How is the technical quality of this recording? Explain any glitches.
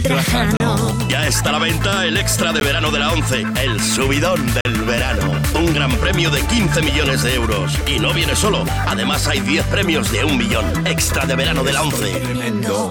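Three short dropouts break up the audio. Gap between stream segments at 0.57–0.60 s, 2.60 s and 4.61–4.65 s: misaligned timestamps leave silent holes of 14 to 42 ms with hard edges, spaced about every 2 s, consistent with 2-second segments.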